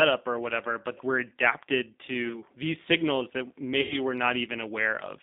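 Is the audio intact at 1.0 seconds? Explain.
No, at 1.0 s the speech passes through a G.729 codec, as throughout, rebuilding the voice from a few synthetic pulses, which fits 8 kbit/s, leaving it rough and narrowed to roughly 200 Hz to 3.7 kHz.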